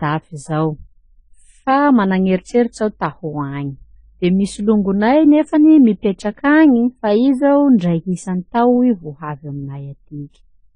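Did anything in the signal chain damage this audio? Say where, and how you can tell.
Yes: transcoding between lossy codecs, audible throughout the speech. Nothing remains above 10 kHz, and two kinds of artefact are heard together, which fits an MP3 near 36 kbit/s likely re-encoded to AAC-LC near 24 kbit/s. The second encoder spent bits on the first one's artefacts and added its own.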